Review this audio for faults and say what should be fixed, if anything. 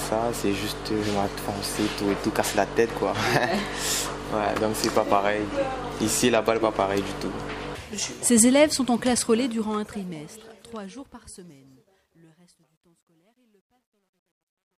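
Gritty grain creeps into the fade-out from 9.02 s, and from 11.59 s to the end at 14.79 s the quiet tail is at its grittiest. This is truncation distortion on a fade: the gain stage keeps only 12 bits, undithered, so low levels collapse into coarse square steps.

To prevent it, apply the fade at 24-bit or floating-point resolution and add dither whenever the result is reduced to a lower bit depth.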